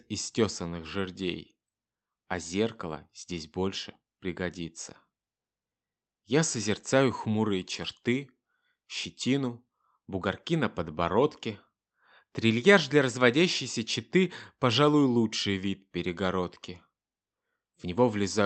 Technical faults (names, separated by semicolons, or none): none